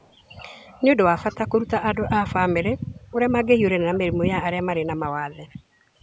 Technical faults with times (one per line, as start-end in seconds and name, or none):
0.00-0.15 echo leak
1.29-1.37 echo leak
3.94-3.99 echo leak
5.50-5.57 echo leak